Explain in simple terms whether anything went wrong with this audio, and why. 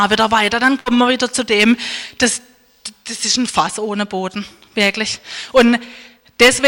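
At 0.79 s there is a burst of packet loss. A run of audio data arrived too late or not at all, so the player stretched the last sound for about 60 ms while fading it, then jumped ahead at 0.89 s, skipping about 60 ms of the original sound.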